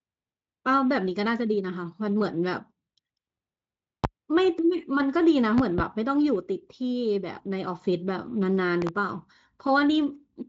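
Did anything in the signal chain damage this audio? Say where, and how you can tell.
Yes, loud pops in the analogue stage. A single pop at 4.04 to 4.07 s peaks about 20 dB above the speech. Double pops at 5.58 to 5.82 s and 8.82 to 8.91 s reach about 15 dB. The speech carries on beneath them, so voltage steps were added. A likely cause is a loose plug or switch.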